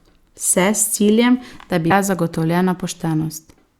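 A speech clip with damaged data in its compressed stream: at 1.87 s, just after "ciljem da", corrupted bytes make the decoder misread the frames and lose sync, so about 46 ms of audio comes out as a brief chirp, squawk, click or short hole before decoding resumes at the next frame header, around 1.92 s.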